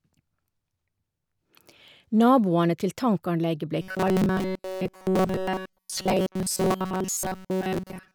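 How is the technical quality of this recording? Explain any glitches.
The recording has one fault, robotic sound from repeated short buffers, running from 3.82 s to 8.1 s, right after "til tankanlegget blei". Fresh audio likely stopped arriving in time, so playback looped a tiny slice of about 5.3 ms, repeating most of the signal. That loop imposes a fixed 188 Hz buzz, turning the speech into a rigid, metallic drone that only loosely tracks what is said.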